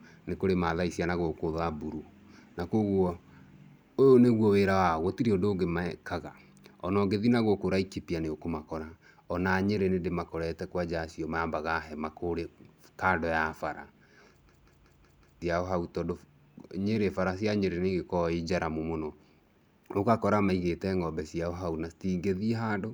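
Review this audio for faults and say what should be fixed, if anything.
From 14.49 to 15.42 s the speech breaks into a machine-gun stutter: one 0.19 s fragment repeats five times, about 5.4 times per second, and roughly a second of audio is lost. This is a system hang loop, where the system froze while the audio hardware kept replaying the same ring buffer, which fits an 8192-sample buffer. Preventing it means running the audio thread at high priority and having the driver mute its output when the buffer stops being refilled.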